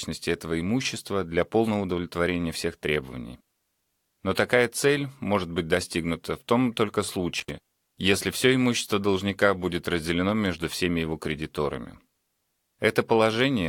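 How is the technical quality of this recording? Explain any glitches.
One glitch mars this speech recording. Intermittent contact at 7.39 to 7.51 s: a loose connection opens for 60 ms, cutting the sound out with crackle at each edge and faint hiss in the gap.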